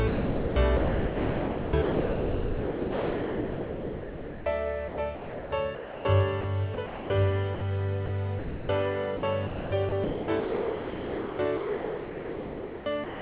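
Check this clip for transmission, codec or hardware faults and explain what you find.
Yes, there are voice-detector faults throughout, heard over a call path that stops at 4 kHz, which fits G.711 mu-law.

Sound chopped by the voice detector, at 0.08–4.46 s, 4.88–6.05 s, 6.74–7.10 s and 9.17 s to the end: the sender's detector likely kept toggling, so sound flickers between real and comfort noise, choppy throughout.

Sound dropped by the voice detector, at 6.41–6.44 s, 7.55–7.61 s, 8.06–8.09 s and 8.39–8.69 s: quiet bits were likely judged background, so brief steady comfort noise replaces them.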